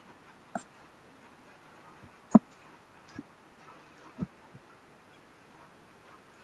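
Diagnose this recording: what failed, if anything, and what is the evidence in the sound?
Nothing in the speech points to a failure at any stage: the room's background noise sits about 49 dB below the speech, and the band-limited top end, reaching about 12 kHz, fits an Opus call path running at around 32 kbps.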